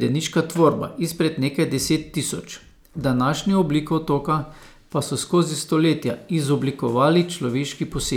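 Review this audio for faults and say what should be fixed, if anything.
Nothing stood out on listening, so there is nothing here that needs fixing.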